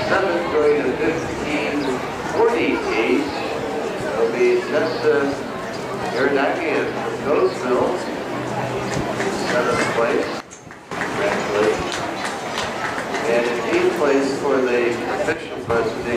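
A sudden gain jump, likely a gain setting applied without a ramp, drops the level by about 14 dB from 10.40 to 10.91 s and about 9 dB from 15.33 to 15.70 s. The sound and its background noise fall abruptly together, then snap back.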